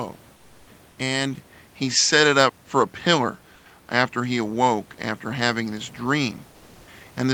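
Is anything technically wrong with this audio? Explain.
Yes. From 1.53 s onward, the sound changes character, likely because the input switched to a poorer device. There is no gap at the switch. Nothing above 7.6 kHz comes through after it, so the sound turns duller. The level also shifts by a few dB.

From 3.55 to 3.65 s, about 100 ms of background is replaced by comfort noise. The sender likely paused transmission, as Opus DTX does, and the receiver filled the gap with synthetic noise. That noise is steady and featureless, about 2 dB quieter than the real room noise around it.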